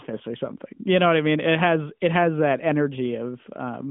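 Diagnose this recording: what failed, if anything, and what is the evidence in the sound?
Nothing failed; no fault can be heard anywhere.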